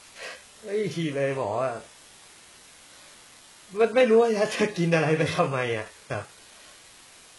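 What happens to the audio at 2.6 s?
Two faults run through the whole clip, so both are present at 2.6 s rather than anything starting there.

The first is low bit depth with dither. The signal is held to very few levels, which points to something like 7 bits, with dither added before rounding. That turns the rounding error into an even, steady hiss, roughly 25 dB below the speech, and there's no crunchy distortion.

The second is heavy HE-AAC compression, likely at a bitrate around 12 kbps. The upper band is rebuilt from copied lower bands rather than coded, and nothing sits above 11.5 kHz. The result is treble that is not the original, with s sounds coming across gritty or lispy.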